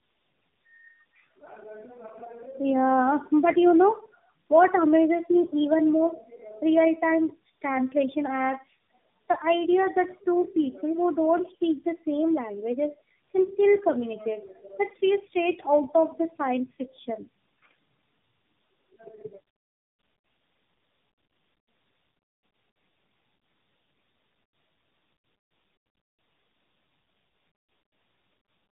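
Throughout the speech there is tandem speech coding: the sound passes through three low-rate speech coders in a row, which points to AMR-NB, iLBC and AMR-NB again, each recoding the last one's output. The errors compound, leaving speech rough, muffled and warbly, with nothing above 3.7 kHz.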